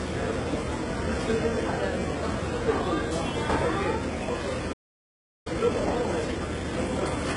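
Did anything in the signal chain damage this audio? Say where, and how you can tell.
Yes. At the codec stage, the treble is likely being synthesised by HE-AAC compression at a very low rate rather than coded directly. The top end has a gritty, metallic brightness whose harmonics fail to line up with the body of the sound.

At playback, the output likely ran dry, causing a playback stall. The sound cuts to silence from 4.72 s to 5.47 s, a gap of about 0.73 s, then resumes rather than continuing smoothly through that span.

Also at playback, the player then works off its backlog with time-compressed catch-up. From 5.47 s to the end, the audio runs about 1.15 times fast at unchanged pitch, with small pieces being cut out and cross-faded together.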